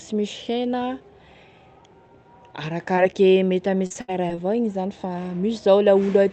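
At 2.95–2.99 s and 3.11–3.14 s, short concealed packet loss: roughly 20 ms went missing each time, and the decoder extended the preceding sound, leaving a brief smear. From 3.86 to 4.39 s, between "mety ame" and "igny zany", repeated packet loss causes choppy, robotic sound. Five gaps, the longest 72 ms, were filled with synthesized continuation over about a third of that stretch. The audio is band-limited to 8 kHz, consistent with an Opus call path at around 32 kbps.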